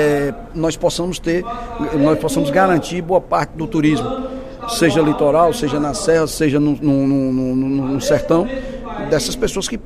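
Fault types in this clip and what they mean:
No technical faults are audible.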